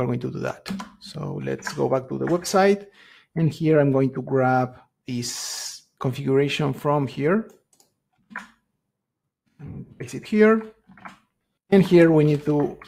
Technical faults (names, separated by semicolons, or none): none